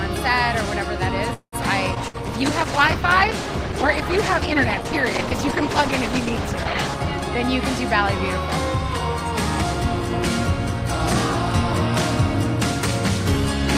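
Right at 1.33 s there's a call audio freeze running to about 1.55 s. The last bit of sound gets stretched into a fading buzz or hiss, then drops to silence for roughly 90 ms, about 190 ms of filler in all. Nothing's actually lost; the audio just picks up where it left off, now running later. That pattern points to packets likely stalling in transit and the jitter buffer draining dry.

At 1.94 s there's a short concealed packet loss, done by 1.99 s. It's a quick smear or wobble where the decoder patched over a hole with only about 15 ms of guessed-at sound. Around 60 ms of real audio is simply gone, so the timeline jumps forward and the lag that built up during the freeze shrinks by roughly 50 ms.

Starting around 1.97 s and lasting until about 7.07 s, there's a call bitrate drop. The sound turns rough and watery, and the top end gets shaved off, so it's duller. That fits the encoder being squeezed from about 64 kbps down to 13 kbps after the bandwidth estimate collapsed. 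It sits at that low rate for nearly 5 seconds before things open back up.

Inside that degraded stretch, at 2.08 s, there's a burst of packet loss through 2.17 s. You get about 58 ms of the last sound carried on and fading, as a held buzz or a dying hiss. Then the audio resumes further along, with around 60 ms of the real material skipped over.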